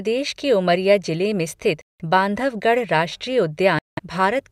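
Speech with two Bluetooth dropouts, at 1.81–2.02 s and 3.79–3.99 s. Each is a silence of about 0.19 s, likely from lost wireless packets. Unlike a buffer stall, the speech resumes further along rather than picking up where it stopped.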